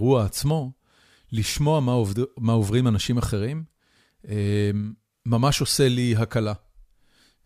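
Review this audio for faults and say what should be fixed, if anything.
Nothing needs fixing; no faults were found.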